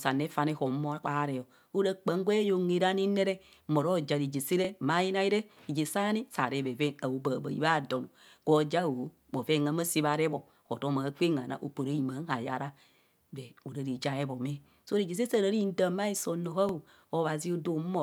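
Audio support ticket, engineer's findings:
Overlapping chunks: stutter at 4.65–4.67, 10.67–10.69, 16.69–16.71 s. Chunk boundaries every 6 s start early. About 23 ms replays at each join.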